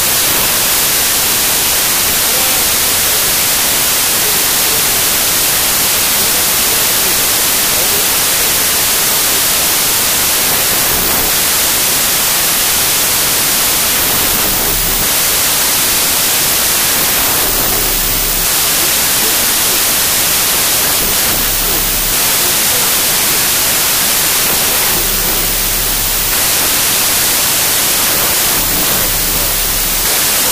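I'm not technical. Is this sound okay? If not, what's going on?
No. The whole clip has a wrong sample width fault: audio stored in 3-byte chunks is being read in 2-byte chunks. Most values come out scrambled, so you hear loud hiss with the real sound buried inside, running at two-thirds speed and lower in pitch.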